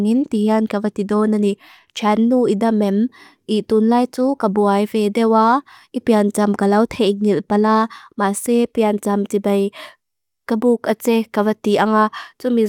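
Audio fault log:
No fault in this speech clip.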